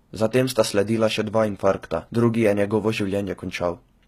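From start to end the speech carries plainly audible HE-AAC compression damage, likely from a low-rate encode near 20 kbps: the treble is rebuilt by copying lower bands upward, so s sounds turn gritty and metallic, and nothing remains above 14.9 kHz.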